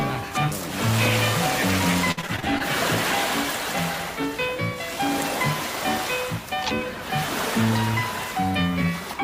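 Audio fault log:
2.11–2.62 s, repeated packet loss (robotic sound): over about half a second, six gaps follow one another in quick succession, the longest 56 ms. Each hole is bridged by stretching the last sound, about 143 ms patched in total and 160 ms missing outright, so roughly 28 % of the stretch is concealment. Unlike a single dropout, which leaves one clean hole, the rapid run of patched gaps makes the audio choppy with pieces missing.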